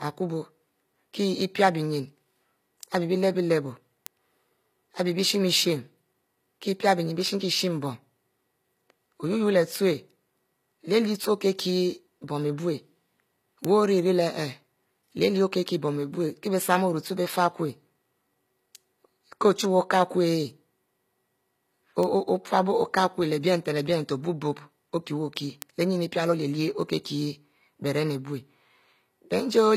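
A speech recording. The treble is gritty and metallic, and nothing reaches above 14.9 kHz. The likely cause is HE-AAC compression at a low bitrate, perhaps around 24 kbps. Word clock ticks recur about once a second from 0.47 s to 29.21 s. Each is a single dropped or repeated sample from an unlocked digital link drifting slightly.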